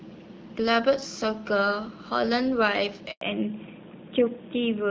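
At 3.11 s the speech cuts out in a handover gap lasting 100 ms, until 3.21 s. The call is being passed from one network to another, and no speech frames arrive while the new link is set up. The level collapses within a few tens of milliseconds rather than fading naturally, leaving a hard hole of silence. Whatever was said during those 100 ms is gone.

From 3.21 s to the end, the call shows a fallback to narrowband. Before the switch, the wideband HD Voice coding carries content up to about 7 kHz with only light codec roughness, which fits AMR-WB around 12.65 kbit/s. After it, nothing above 4 kHz remains. The sound suits an older narrowband codec at roughly 12.2 kbit/s. Sibilants and consonant edges lose their top end, and the speech turns duller and rougher.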